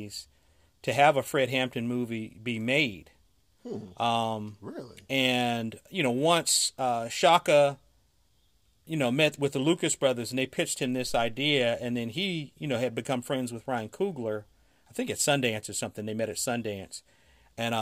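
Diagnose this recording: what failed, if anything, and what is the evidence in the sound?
Nothing failed; no fault is audible anywhere in it.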